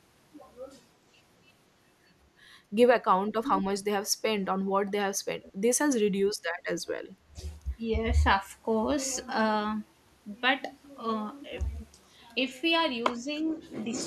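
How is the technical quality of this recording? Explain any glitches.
The technical quality is compromised by a cluster of call-processing glitches between about 3.3 and 7.4 seconds.

Speech suppressed in double talk occurs from 3.34 to 3.71 s, 4.66 to 6.37 s and 6.94 to 7.4 s. The speech dips sharply by as much as about 30 dB and drops out in pieces for a few hundred milliseconds. This is likely an echo canceller turning everything down while both sides talked. Unlike a network dropout, these are level ducks, not gaps.

Echo leak appears from 4.07 to 4.91 s as a faint trailing copy of the speech, roughly 224 ms behind it and very quiet. The likely cause is a loudspeaker's echo slipping past incomplete cancellation. Unlike room reverberation, it is a distinct delayed repeat rather than a smooth decay.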